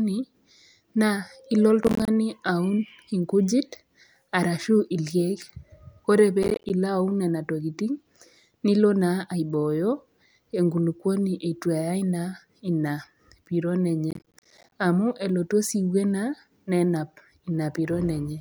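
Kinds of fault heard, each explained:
processor overload crackle: the processor misses a run of buffer deadlines, and each missed block of around 10 ms drops to silence. The speech tears into gritty crackle at 1.83–2.08 s, 6.43–6.70 s and 14.11–14.72 s, and the last burst is the longest, with the most missed blocks.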